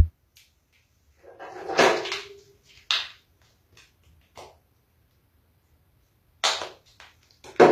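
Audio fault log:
throughout, HE-AAC compression, likely: the treble is bright but synthetic and gritty, with nothing above 14.9 kHz. Upper bands are rebuilt from copied lower ones, so harmonics don't line up across the crossover. Plainly audible damage, which fits roughly 24 kbps.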